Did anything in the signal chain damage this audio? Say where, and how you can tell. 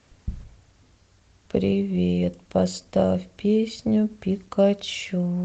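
No, nothing stood out on listening.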